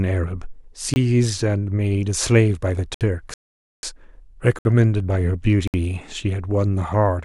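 Speech, broken by two kinds of dropout. Four blocks of digital silence hard-cut the sound to silence and back: 0.94 to 0.96 s (21 ms, which fits a 1024-sample buffer missed in time), then 64 ms holes at 2.94, 4.59 and 5.68 s. In the rebuffering stall from 3.34 to 3.83 s, the audio stops for about 493 ms and then resumes exactly where it left off. It is longer and silent, with nothing missing, so the clip simply runs later.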